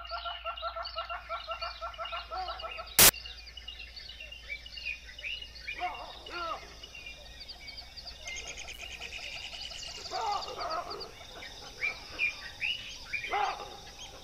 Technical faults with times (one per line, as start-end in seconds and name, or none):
2.99-3.09 samples built from the wrong bytes